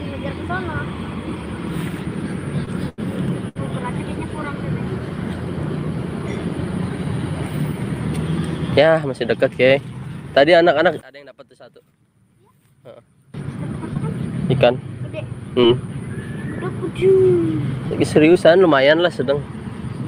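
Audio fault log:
2.65–3.57 s, repeated stalls (stutter): The sound drags and hitches three times, with the longest hold about 88 ms. Packets arrived late, so the receiver's buffer ran dry each time and the last sound was stretched for 174 ms in all, nearly a fifth of the span, with nothing lost.
9.03–9.36 s, jitter buffer speed-up: The audio briefly rushes forward, playing at about 113% of normal speed with no change in pitch. The buffer had built up extra delay, so the receiver trimmed repeated pitch-period-length slices, about 50 ms altogether, to catch up.
11.01–13.34 s, one channel inverted: The sound collapses to a faint residue about 26 dB quieter, as everything common to both sides cancels. The likely cause is reversed polarity on one stereo channel, so summing to mono leaves only the difference between left and right.
13.94–13.97 s, short concealed packet loss: A brief smear or wobble interrupts the sound. 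About 20 ms of audio never arrived in time; the receiver patched 9 ms of the hole by extending the preceding sound, then blended back into the real signal.
15.61–15.90 s, repeated packet loss (robotic sound): The sound turns choppy over this short stretch. Three holes follow in quick succession, the longest 26 ms, with 40 ms missing outright and 53 ms filled by continuing the previous sound, roughly a fifth of the span.
17.00–18.37 s, scattered short gaps: Mostly clear sound with a few isolated hiccups and brief ticks. About three separate packets were lost or late, each hole only around 15 ms at most; 40 ms went missing and small patches continued the prior sound to cover them.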